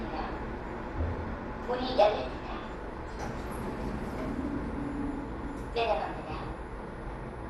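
From start to finish the sound is dull, with nothing above about 12.1 kHz and a gurgling, grainy edge. That's the signature of MP2 compression, likely at a low rate around 64 kbps, with upper sub-bands switching off and the remaining ones coarsely quantised.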